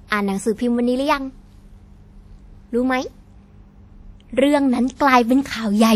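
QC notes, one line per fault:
Throughout, WMA compression: the speech carries a ringing, washy quality, with a hiss that swells and fades along with the signal rather than sitting at a steady level. This is likely lossy transform coding with long blocks, where quantisation noise is smeared across tens of milliseconds around each sound and weaker spectral detail is discarded outright. The damage is plainly audible and fits an early WMA encoder running at a low rate around 48 kbps.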